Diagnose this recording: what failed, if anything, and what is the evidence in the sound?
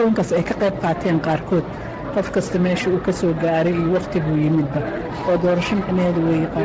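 Nothing in the recording failed.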